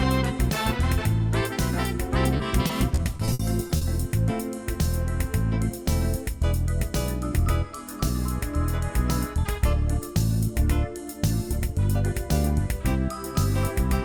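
From 2.37 to 3.83 s, repeated packet loss leaves the sound choppy and robotic. Nine short holes, none longer than 60 ms, are each patched by stretching the preceding sound, about 240 ms in all. That rapid stutter sets it apart from a single, longer dropout.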